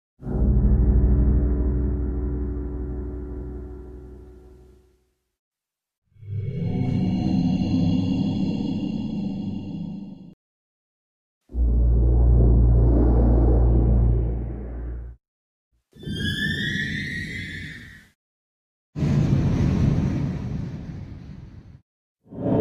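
From 19.27 to 22.12 s the audio drops into a wrong sample rate fault. It runs at 0.919 speed and about 1.5 semitones lower, which fits 48 kHz material played back at 44.1 kHz. Tempo and pitch sag together by the same ratio, unlike a pitch shift.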